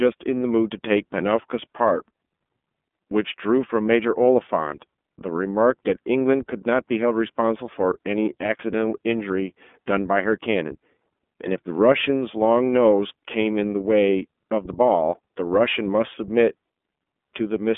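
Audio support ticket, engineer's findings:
iLBC codec, throughout. Narrowband: nothing above 3.7 kHz, line band about 200 Hz to 3.5 kHz. Plainly audible rough, synthetic texture from frame-independent excitation coding, consistent with 30 ms frames and the 13.33 kbps mode.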